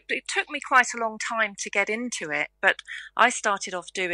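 From 1.61 s to 2.42 s the treble goes dull and a gritty, grainy noise rises under the sound, then both clear. This is a Bluetooth SBC bit pool drop: the link came under strain and the encoder cut its bit budget, and the depth of the dulling fits a bit pool falling from around 31 to 15, roughly 105 kbps. Starved of bits, the top sub-bands were dropped and the lower ones coarsely quantised for those 0.8 seconds.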